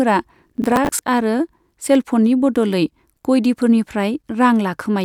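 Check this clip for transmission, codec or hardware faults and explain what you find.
One fault turns up, early in the clip.

Processor overload crackle runs from 0.50 to 0.99 s. The processor missed a run of roughly fifteen buffer deadlines, and each gap was filled with a repeat of old audio. The hard-edged splices make a gritty crackle over the speech. Their spacing fits buffers of around 10 ms.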